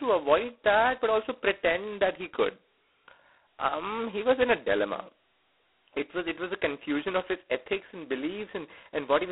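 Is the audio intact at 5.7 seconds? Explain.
No. At 5.7 seconds, as throughout the clip, the speech carries a harsh, rasping hiss that rises and falls with its level, and it sits in a narrow telephone band of about 300 Hz to 3.4 kHz, with nothing above 3.9 kHz. This is G.726 ADPCM coding. Each sample is sent as a coarse difference from an adaptive prediction, and the heavy grit points to its 16 kbit/s mode, which keeps only two bits per sample.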